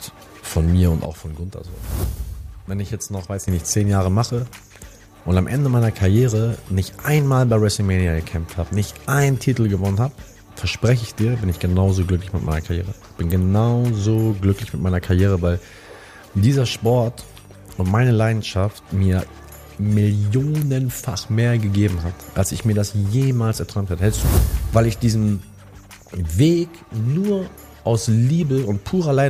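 Sudden gain jump, 1.05 to 3.48 s: the level drops abruptly by about 9 dB, with sound and background noise falling together, then jumps back up just as suddenly. The likely cause is a digital gain change applied between adjacent samples with no ramp.

Compressed frames skipped, at 4.75 to 4.78 s and again at 14.31 to 14.34 s: the audio leaps forward, losing about 40 ms at the first point and about 20 ms at the second. That fits two and then one missing 20 ms frames, either absent from the stream or rejected as damaged by the decoder.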